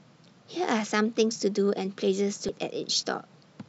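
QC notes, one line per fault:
2.49 s, damaged data in a compressed stream: there's a quick glitch right here in the speech. A bit of the compressed data got mangled, so the decoder couldn't make sense of the frame at that spot. It lost its footing and had to hunt for the next clean frame header before it could carry on. That brief break in decoding is the glitch you hear.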